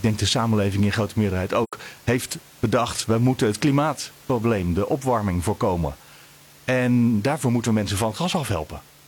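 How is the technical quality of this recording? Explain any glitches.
There's one real glitch, an AAC frame loss with muting from 1.63 to 1.73 s, right after "samenleving in grote meerderheid". Roughly 85 ms goes silent, which fits two lost frames zeroed by the decoder, so the overlapping windows fade it into a soft gap before "heeft bedacht we moeten". The faint room noise, about 26 dB under the speech, belongs to the recording itself.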